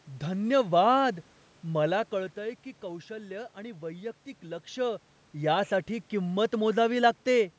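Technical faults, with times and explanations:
Nothing stood out on listening to this speech clip; the background room noise and the talker's shifts in level around 2 s and 4.5 s are part of the recording itself.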